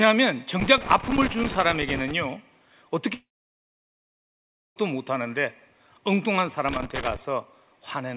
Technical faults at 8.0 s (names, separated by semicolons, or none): none